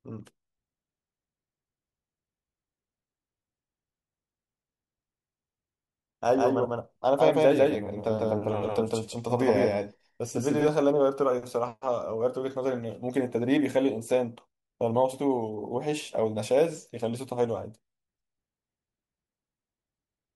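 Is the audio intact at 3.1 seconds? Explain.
Yes, the speech at 3.1 seconds is intact, with no dropout, click, distortion or other break in the signal at that moment.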